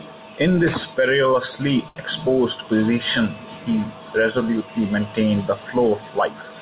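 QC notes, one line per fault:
1.88–1.98 s, short stall from a late packet: a packet arrived late, the jitter buffer ran dry, and the receiver stretched the last sound for about 80 ms before resuming where it left off. Nothing is lost, but everything after plays 80 ms later. On a spectrogram the harmonics run flat and unchanging across the gap, under the call path's 4 kHz ceiling.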